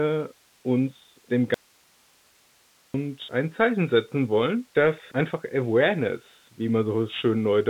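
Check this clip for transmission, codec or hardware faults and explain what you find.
Two faults are audible in this speech clip.

Throughout, the Bluetooth CVSD headset codec's one-bit slope coding leaves granular hiss and scratchy sibilants; the spectrogram shows nothing above 3.8 kHz, a narrowband result that fits a 64 kbps link.

From 1.54 to 2.94 s, right after "uns dem", an audio dropout to a faint residue cuts the speech abruptly for 1.4 s, likely a lost link with a live path. Only hiss about 35 dB down remains, seen as a flat, near-empty band in the waveform.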